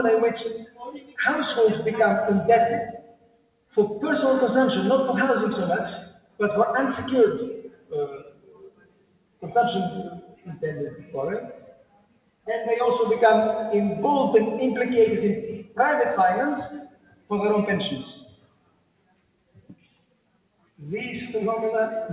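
What you've got here is non-speech audio run through a speech-tuned noise suppressor that was left switched on, so it keeps deciding sustained material is background noise and pulling it down. Across the clip the level swings by something like 20 dB as the suppressor clamps and releases. Transients punch through fine, but anything held or decaying sinks, which gives that pumping, fluttery, thinned-out feel. You can hear the sound being cut by the noise suppressor most clearly at 0.53 to 1.18 s, 2.9 to 3.77 s, 6.0 to 6.4 s, 7.56 to 9.43 s, 10.2 to 12.47 s, 15.58 to 15.79 s, 16.73 to 17.31 s and 18.03 to 20.81 s. In those spots it dips by about 17 to 18 dB. The longest stretch, near the end, loses roughly three seconds of sustain. The whole thing also has a narrow, phone-like top end with nothing above 4 kHz, which fits a G.711 mu-law call codec.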